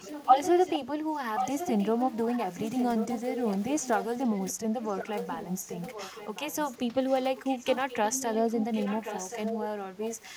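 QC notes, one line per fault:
0.00–0.79 s and 1.36–9.65 s, echo leak: a delayed second copy of the speech trails the direct signal by about 1.08 s, sitting roughly 10 dB below it. The lag is long enough to be heard as a separate repeat rather than coloration, so phrases overlap their own earlier content. This is likely a loudspeaker at the far end feeding back into its microphone, with the echo canceller failing to remove all of it and sending the residue back down the line.
9.66–9.76 s, background gated by the echo canceller: the room tone ducks by as much as about 11 dB for roughly a tenth of a second, then recovers. It lands at the tail of the echoed section. While the loudspeaker was active the canceller clamped the microphone gain hard, and the ambient floor dropped with it. The floor came back as soon as the suppression released.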